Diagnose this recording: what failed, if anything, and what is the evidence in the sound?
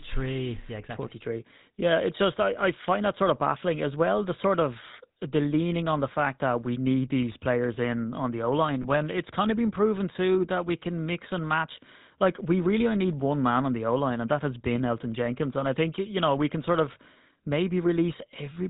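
The whole recording has a buzzy, gravelly roughness, and nothing comes through above 4 kHz, so the speech sounds dull and coarse. That is damage from the codec stage, specifically the GSM full-rate codec, and it fits the 13 kbps full-rate coder. It encodes speech as a vocal-tract filter excited by regularly spaced pulses built from only a third of the excitation samples. That sparse excitation is what gives the grainy, buzzing texture throughout.

At 8.82 to 8.86 s the speech briefly turns into a short, rough, metallic ring before normal sound resumes. This is lost GSM frames, a network-stage fault. The loss looks like a single 20 ms frame, and the decoder concealed it by reusing the parameters of the last good frame. Because the gap is so short, the held sound rings only momentarily and never fades to silence.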